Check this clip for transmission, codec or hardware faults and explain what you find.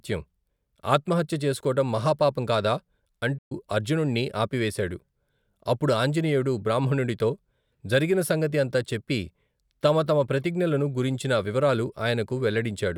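One fault turns up, a playback stall in the speech. From 3.38 to 3.52 s the audio drops out for about 125 ms, then picks up again. The likely cause is the player running short of data or its thread getting blocked, so output just goes silent until it recovers.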